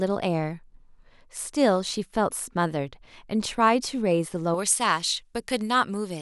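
Pre-emphasis left on from 4.54 s to the end at 6.22 s: the treble boost applied before transmission was never undone by the matching de-emphasis, leaving highs about 11 dB hotter at 10 kHz than at 1 kHz, which fits a J.17 curve. The speech turns thin, bright and sibilant.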